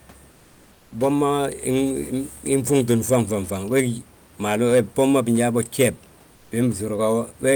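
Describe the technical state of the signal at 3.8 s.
A short harsh crackle on the speech peaks from 3.77 to 3.81 s is hard clipping: the signal overdrives a stage by about 5 dB, flattening the peaks.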